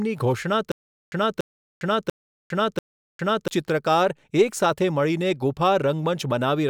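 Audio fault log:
0.72–3.48 s: stutter with silent gaps. A 286 ms burst of speech plays four times, each followed by about 404 ms of dead silence, repeating every 691 ms. The stream likely stalled and replayed its last fragment at each retry. The speech in between is lost.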